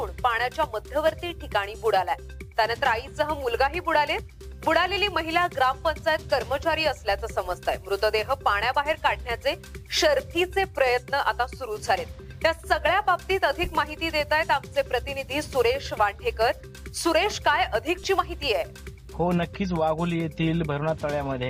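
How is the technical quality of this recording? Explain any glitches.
The signal holds steady throughout, with no glitches, dropouts or other technical faults to point to.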